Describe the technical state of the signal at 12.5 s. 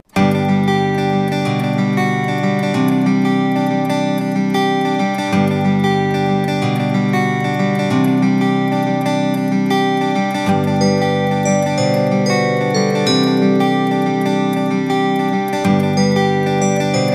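At 12.5 s the signal is intact, with no audible dropout, distortion or other technical fault.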